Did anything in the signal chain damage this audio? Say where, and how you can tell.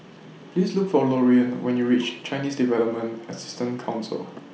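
No, nothing along the chain seems to have harmed this speech, so there's no stage to single out and no damage to point to.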